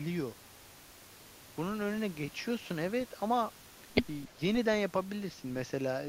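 An echo canceller likely clamped down during a moment of double talk, when it could not tell the near talker apart from echo of the far side and attenuated everything together. The result is speech suppressed in double talk from 4.28 to 4.40 s: the speech dips by roughly 10 dB for about a tenth of a second, a brief hole where the level sags before recovering.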